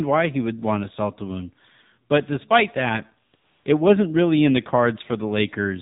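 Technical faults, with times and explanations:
Throughout: AMR narrowband mobile codec. The audio is cut off sharply at 4 kHz and has a plainly buzzy, synthetic texture from the pulse-driven vocal-tract model, which fits a 7.4 kbps mode. A spectrogram shows an empty band above 4 kHz and smeared, blocky harmonics.
3.32–3.34 s and 3.36–3.66 s: AMR comfort noise. No speech frames were sent, so the receiver filled the 20 ms and 300 ms gaps with smooth synthetic noise that switches in and out. The waveform shows flat, even noise, and the spectrogram shows uniform, featureless texture.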